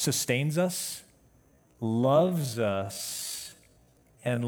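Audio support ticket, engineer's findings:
Time-stretched section, 1.47 s to end of clip. Speech abruptly slows to about 0.57x original pace, pitch unchanged. Short segments repeated to pad duration. Likely cause: pitch-preserving stretch in editing or length-fitting software. Leading 1.47 s at normal pace.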